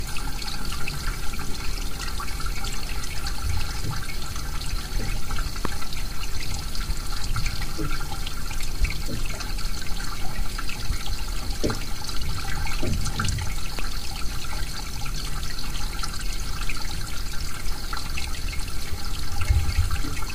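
At 5.65 to 5.67 s a loud pop cuts through the audio. It is a single sharp crack, roughly 15 dB above the surrounding sound. The audio carries on beneath it unchanged. A second loud pop follows at 13.79 to 13.81 s. It is again a single hit, a little softer at roughly 10 dB above the signal. Each is a sudden electrical pulse riding on the signal, likely from a switch, a plug, static or a driver glitch.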